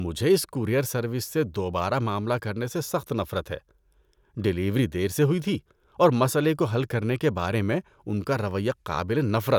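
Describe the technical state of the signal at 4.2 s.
At 4.2 s the speech signal is intact, with no audible technical fault at that moment.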